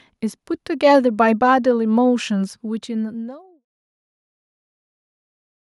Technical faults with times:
none

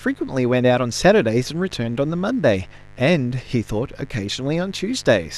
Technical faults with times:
0.00-5.38 mains buzz

